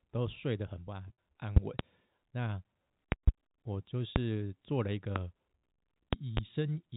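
From 1.08 to 1.17 s there is packet loss with pitch repetition. About 70 ms of audio went missing, scattered over 100 ms, with the longest gap 50 ms. The receiver bridged it by repeating the last pitch period, giving a briefly held, buzzy tone that shows as flat, unchanging harmonic stripes on a spectrogram.

Loud pops follow: two between 1.57 and 1.83 s, two between 3.12 and 3.31 s, single ones at 4.16 to 4.19 s and 5.16 to 5.19 s, and two between 6.13 and 6.40 s. Each is a sharp pop about 25 dB above the sound, likely from a sudden voltage spike, and appears as a tall waveform spike and a full-height vertical line on a spectrogram.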